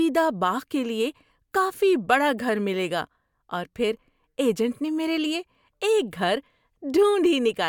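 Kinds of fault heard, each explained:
No technical faults can be heard in this speech.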